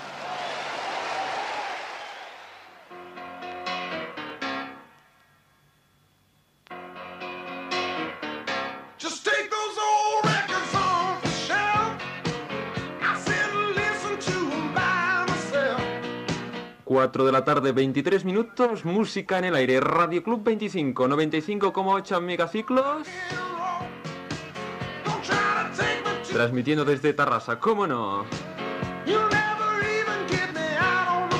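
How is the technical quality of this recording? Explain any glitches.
There's one glitch worth flagging. At about 4.30 s you get a small jump in the sound, where only a few milliseconds go missing. It's likely a dropped buffer (overrun): the samples weren't read before the hardware overwrote them, so the audio splices straight across with no gap.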